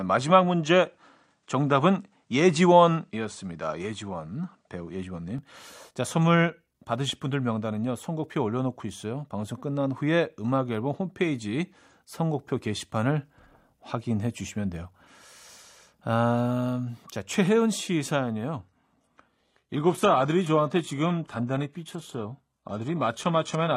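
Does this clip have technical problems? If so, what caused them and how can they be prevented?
Yes. From 0 to 5.38 s the speech sounds dull and boxy. Nothing reaches above 9.9 kHz. A faint new background noise and a level shift of about 5 dB are present. At 5.38 s it clears with no gap. The likely cause is an input switched to a poorer device. Lock the recording input to one good microphone.

From 18.6 s to the end, the treble is cut above 12.3 kHz. This is an adaptive stream at a lower bitrate, which fits a drop to a low-bitrate HE-AAC version. Use a steadier connection or fix the stream at a higher bitrate.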